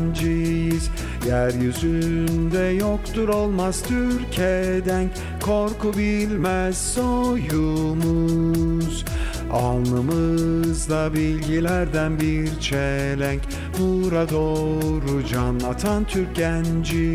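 No technical faults can be heard anywhere in the audio.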